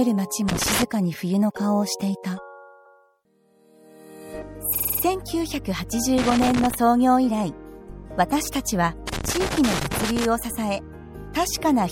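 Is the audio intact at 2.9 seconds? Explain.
No. From 2.85 to 2.94 s there are repeated frames. A 96 ms block of compressed frames plays a second time, so the sound stutters.

The treble is also dull and watery, with swirling artefacts. That is likely MP3 compression at a low bitrate, which fits about 64 kbps.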